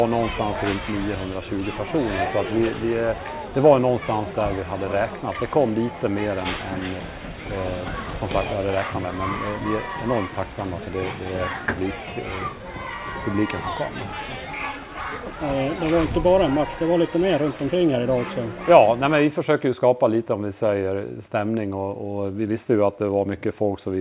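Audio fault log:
No faults can be heard in the audio. Nothing in it calls for an entry in this log.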